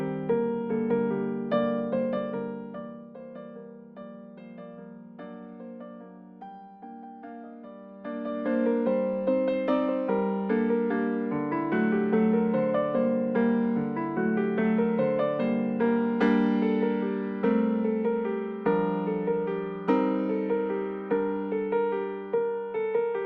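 Zipper noise appears twice in the audio. From 1.79 to 3.13 s the level drops by roughly 20 dB, and from 7.7 to 8.65 s it rises by about the same amount. In both moves the gain changes in discrete unsmoothed steps, around a hundred a second, which fits a per-buffer gain update. Each step leaves a small discontinuity, so a fine ticking buzz rides on the sound for as long as the level is moving.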